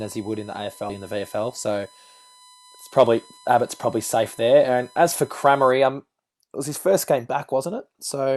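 A steady whine at 1 kHz, about 30 dB below the speech, runs from the start to 5.72 s, ending just before "um it was his". This is USB whine: the bus's 1 ms frame activity leaks into the audio path through power or ground, producing a fixed-pitch tone.

From 0.89 to 1.0 s the speech jumps abruptly forward. Roughly 0.4 s of speech is missing, and the two sides are butted together with no filler or gap. This is a skip ahead: a stretch of audio was discarded while later audio was already waiting to play.

Between 1.5 and 1.93 s the speech sounds hurried, running at 114% speed while its pitch stays unchanged. This is a jitter buffer speed-up. The buffer held more audio than its target, so the receiver repeatedly cut out short pitch-period pieces, totalling around 70 ms.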